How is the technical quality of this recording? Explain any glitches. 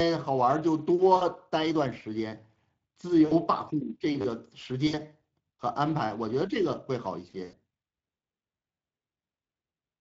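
The recording's technical quality is poor. The speech has been through a damaging low-bitrate codec, and it also has four concealed dropouts and one short stutter.

The Speex codec is present for the whole clip. This CELP speech coder rebuilds the voice from a filter model and a coded excitation. Too few bits were spent on that excitation, which fits a rate of roughly 20 kbps. The damage is plainly audible: the voice sounds noisy and hoarse.

VoIP packet loss concealed by the speech codec occurs at 1.15 to 1.24 s, 3.25 to 3.35 s, 4.87 to 5.02 s and 7.43 to 7.56 s. Packets went missing, about 60 ms of audio in each of the first three gaps and about 100 ms in the last, which points to runs of three and five codec frames. The decoder filled each hole by extending its last pitch and filter while lowering the gain. At each of these points the voice smears into a fading buzzy tone or coloured noise. 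It then sounds weak for a moment after real audio resumes, because every new frame is built on the degraded state left behind.

A repeated buffer occurs at 4.21 to 4.25 s. The playback device ran short of fresh audio and replayed the last block it held, which fits a 10 ms buffer, four more times. Essentially nothing was lost from the sound itself. Because the repeated piece is so short, the hard joins come quickly one after another and are heard as a brief buzzy stutter rather than a repeated syllable.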